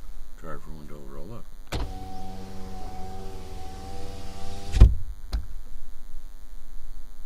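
From start to finish there's a DECT cordless phone buzz sitting faint, well under the everyday sounds. A nearby DECT handset or base pulses its radio 100 times a second, the audio circuitry rectifies those bursts, and you get a thin, steady 100 Hz buzz full of harmonics.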